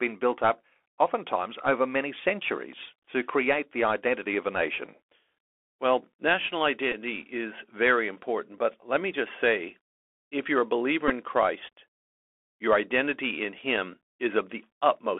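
Bluetooth CVSD headset codec damage runs through the whole speech recording, plainly audible: the band sits between 300 Hz and 3.5 kHz, and the one-bit delta coding, which fits a 64 kbps stream, leaves scratchy s sounds, slope-overload distortion on loud high content and a granular hiss. A Bluetooth headset packet repeat occurs at 6.92 to 6.95 s and again at 11.08 to 11.11 s. Each time, about 15 ms of lost audio is filled by replaying the last packet, which points to four 3.75 ms packets and produces a brief buzz near 267 Hz.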